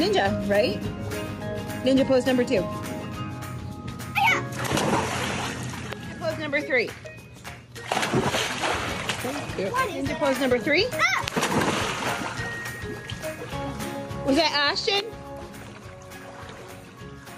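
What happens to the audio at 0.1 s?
At 0.1 s the audio already shows gain pumping, which runs through the whole clip. The gain swings by around 10 dB, pulled down under each loud sound. Level differences are squashed. The likely cause is excessive input gain driving a fast limiter.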